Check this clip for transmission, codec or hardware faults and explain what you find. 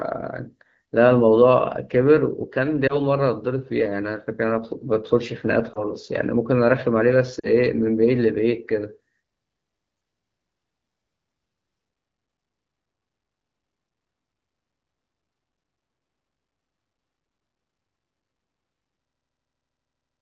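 One kind of fault appears, three times: lost AMR speech frames. The events fall at 2.87 to 2.94 s, 5.73 to 5.85 s and 7.39 to 7.50 s. Radio errors corrupted the frames, so the decoder repeated its last good pitch and vocal tract settings at falling gain. The first two gaps are each a brief dip or warble, and the third drops to near silence; the speech comes back weak or rough for a moment. The first two fit one lost 20 ms frame each. The third, about 40 ms, fits two.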